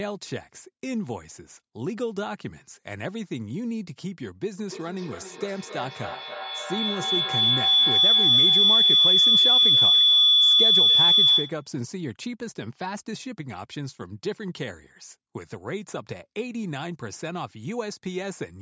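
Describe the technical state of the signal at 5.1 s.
At 5.1 s there is feedback howl, running from 4.58 to 11.72 s. Two devices on one call share a room. Each loop trip adds gain, so the repeats build. A tone around 3 kHz pulses about every third of a second, peaking about 12 dB above the speech.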